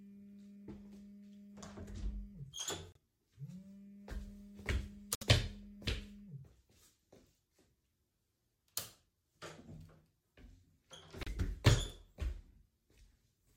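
A recording of everyday sounds that drops out to dead silence three times: at 2.92 to 2.97 s for about 32 ms, at 5.15 to 5.23 s for about 65 ms, and at 11.23 to 11.28 s for about 34 ms. That pattern points to a likely Bluetooth stall, where radio interference delayed packets long enough for the headphones' buffer to run empty, so playback paused until the resent data arrived.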